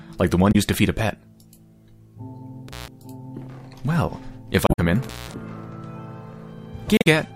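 At 0.49 to 0.55 s, and again at 4.64 to 4.79 s and 6.94 to 7.07 s, damaged data in the compressed stream makes the decoder misread frames and lose sync while it hunts for the next frame header. Each event is a short chirp or squawk with no crackle, unlike a contact fault. At 2.68 to 2.88 s and 5.03 to 5.34 s, an intermittent contact opens the line for 137 ms and then 178 ms. The sound drops out to faint hiss, framed by crackle at the edges where the connection breaks and remakes.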